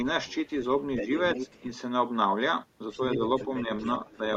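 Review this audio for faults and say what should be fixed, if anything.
Other side's voice leaking through: the echo canceller likely failed to remove the loudspeaker's far-end signal from the microphone. A second voice sits under the speech at 0.26–0.5, 0.96–1.6, 2.91–3.18, 3.38–3.9 and 4.07–4.17 s. It is faint in the first and last stretches but close to the talker's own level from 0.96 s. Retuning the canceller's adaptive filter, or using a headset so the far end never reaches the microphone, would prevent it.

Speech suppressed in double talk: while both sides spoke, the canceller likely could not separate its own talker from the echo and attenuated both. The speech briefly dips by roughly 10 dB at 1.61–1.65 s and 4.15–4.22 s, each time right where a leak ends or overlaps. Better double-talk detection in the canceller would keep the talker's level steady.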